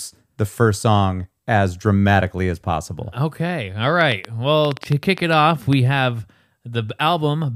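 Something in the chain, likely interference from nearby equipment or a faulty connection or power supply, injects repeated pulses into this speech recording. The result is a train of clicks from 4.01 to 5.74 s: about ten similar pops at an uneven pace of roughly 6.4 per second, peaking well above the speech.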